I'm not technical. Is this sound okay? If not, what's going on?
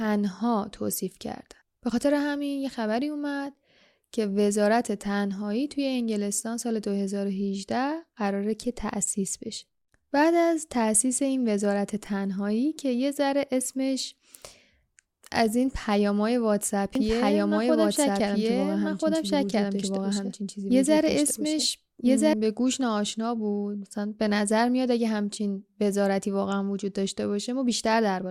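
No. From 16.95 to 22.33 s there's a doubled audio track: a likely slower second path replays the speech just as loud, about 1.5 seconds behind.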